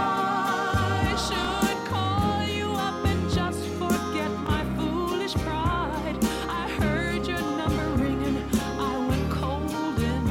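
A brief click or stutter is heard at 1.45, 4.47 and 7.49 s, each lasting 20 ms and recurring every 3 s. These are overlapping chunks: each 3-second chunk starts before the previous one ends, so 20 ms of audio plays twice at every join.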